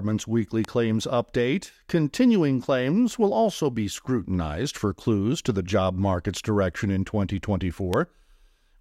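A speech recording with two loud pops, sharp single clicks about 15 dB above the speech level, at 0.65–0.67 s, just before "claims update continuing claims", and at 7.94–7.96 s. The speech continues underneath each one. They are likely brief voltage pulses from a plug, switch, static or driver glitch entering the signal chain.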